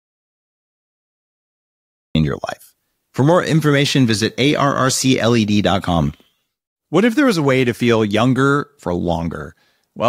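From the start until 2.15 s the speech is absent and the track holds silence with no room tone; this audio dropout to silence likely comes from a lost input being recorded as silence. Sound returns abruptly, mid-phrase, at "your life".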